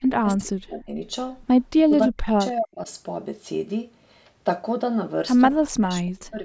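The speech dips and breaks up in chunks three times: from the start to 1.03 s, 1.83 to 2.89 s, and 5.58 s to the end, falling by about 30 to 40 dB. That's likely speech suppressed in double talk, with the echo canceller ducking this talker while the far end spoke.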